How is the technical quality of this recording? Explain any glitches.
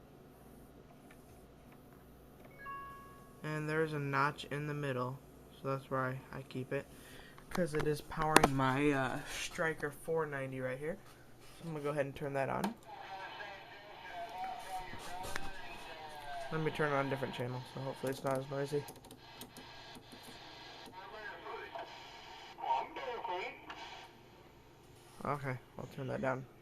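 No glitches or technical faults can be heard anywhere.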